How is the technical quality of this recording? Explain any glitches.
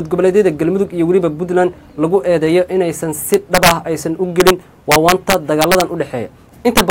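Integer overflow damages the loudest passages. It strikes at 3.34–3.71 s, 4.40–4.50 s, 4.92–5.81 s and 6.77–6.90 s, with peaks driven about 2 to 5 dB over the limit. Those peaks wrap to the opposite sign instead of limiting. Violent cracks result, harsher than clipping.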